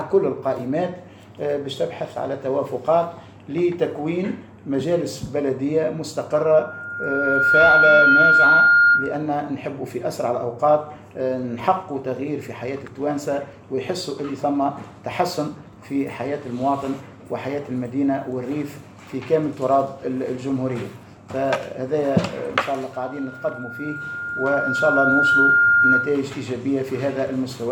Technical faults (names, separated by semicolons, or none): loudspeaker feedback squeal